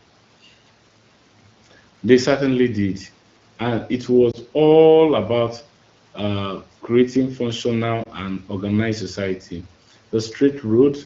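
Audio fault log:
4.31–4.37 s and 8.03–8.09 s, lost AMR speech frames: each time a radio error corrupted a single speech frame, so the wideband decoder repeated the previous frame's pitch and vocal tract shape at lowered gain, heard as a brief dip or warble.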